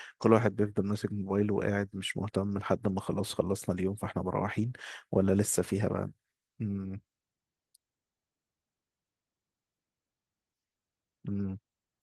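No faults in this speech clip; the Opus voice coding at about 20 kbps in hybrid mode leaves only light coding damage at full bandwidth.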